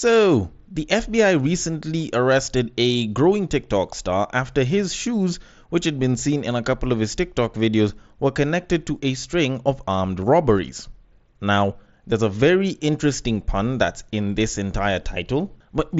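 Nothing's technically wrong with this speech clip; it's simply coming through a Bluetooth headset link on the mSBC codec, which is doing its ordinary job here.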